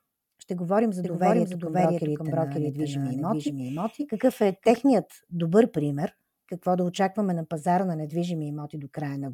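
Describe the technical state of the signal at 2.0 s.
At 2.0 s a doubled audio track runs from 1.04 to 4.76 s, after "говорим за": an equally loud copy trails half a second behind, likely a second, slower capture path. Unlike an echo, it never decays and starts and stops abruptly.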